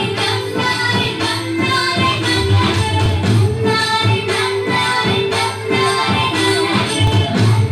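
At 1.05, 3.06, 5.07 and 7.07 s there are brief clicks from overlapping chunks: the audio was handled in 2.0 s blocks, each starting about 7 ms before the previous one ended, so that sliver plays twice at every join, giving a regular ticking stutter.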